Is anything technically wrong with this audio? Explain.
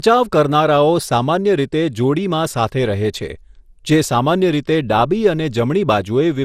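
Yes. Throughout, the speech sounds swirly, hollow and smeared, with consonant attacks blurred and nothing above 15.9 kHz. This points to generation loss, likely from around seven rounds of MP2-style encoding at roughly 96 kbit/s, each pass adding fresh quantisation noise.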